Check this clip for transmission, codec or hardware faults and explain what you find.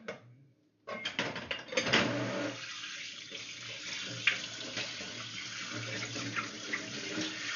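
Nothing stood out on listening to this sound.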